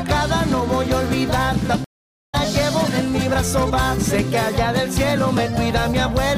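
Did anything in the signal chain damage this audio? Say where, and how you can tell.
Yes, a stream reconnect at the network stage. The audio drops out at 1.84 s for about 0.45 s, then comes back at 2.35 s around 0.4 s further along, so a chunk is skipped. The connection broke, the player re-established it, and a fresh decoder picked up mid-stream.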